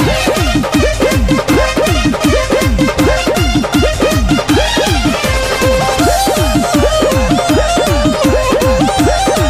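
The audio has chunks out of order at 1.53 to 1.55 s and at 3.95 s. Short blocks of 5.33 ms were written late. One block plays three chunks after its place, the other one chunk late. Each gives a brief jumbled blip with three hard joins.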